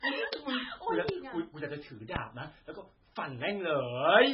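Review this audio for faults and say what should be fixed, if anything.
The whole clip has that watery, swirly quality, and nothing makes it above 5.5 kHz, so the speech sounds dull and the s sounds chirp and smear. That's most likely MP3 compression at a very starved bitrate, something around 16 kbps. The encoder chopped the treble at a fixed point and kept dropping weak frequency lines in and out from frame to frame. Go back to the source and re-encode at a decent bitrate, or keep a lossless copy.

There are two loud pops on top of the speech, which keeps going underneath: one from 1.09 to 1.11 s, roughly 20 dB above the speech, and a slightly softer one from 2.16 to 2.19 s, about 15 dB up. Each is a single sharp hit lasting around 25 ms, the kind of thing a sudden voltage step makes when it gets shaped by the circuitry after it, most likely a plug, switch or static discharge. A de-clicker or a hand repair will clean these up, and next time keep cables and switches untouched while recording.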